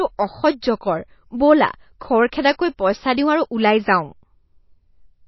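From start to finish, the speech has been squeezed through a low-bitrate encoder, most likely MP3 compression at a rate around 24 kbps. Starved of bits, the encoder has discarded everything above 5.8 kHz, so the sound is dull and muffled, with sibilants losing their edge. It has also dropped weaker frequency lines that flicker in and out between frames, giving a plainly audible watery, swirling texture and smeared consonant onsets.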